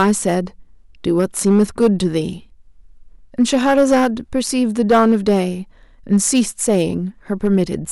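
Hard clipping hits the speech at 0.00–0.34, 1.19–2.18, 3.41–4.07, 4.81–5.41, 6.13–6.82 and 7.45–7.62 s, overdriven by about 2 to 8 dB. Peaks are sliced flat, adding harsh high harmonics. Unlike soft saturation's warm rounding, the peaks are cut hard and flat.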